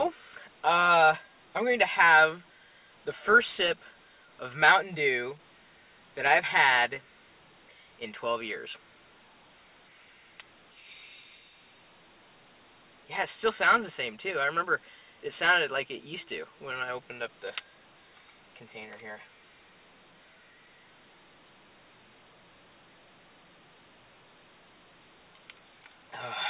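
No technical faults can be heard anywhere in this clip.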